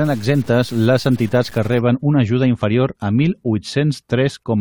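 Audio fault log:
0.00 to 1.81 s, low bit depth without dither: the speech up to "una ajuda inferior a" sounds grainy and rough, with a gritty distortion that tracks the voice and gets worse as it quietens, and the softest bits sputter or drop out between steps. That fits about 6 bits of resolution, likely truncated with no dither, so the rounding error rides along with the signal instead of sitting as a steady hiss, landing roughly 25 dB below it.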